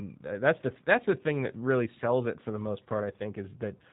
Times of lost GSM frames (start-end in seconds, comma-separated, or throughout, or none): none